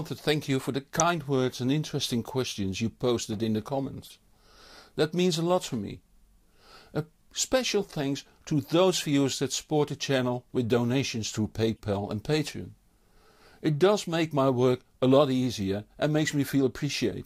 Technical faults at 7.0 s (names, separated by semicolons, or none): none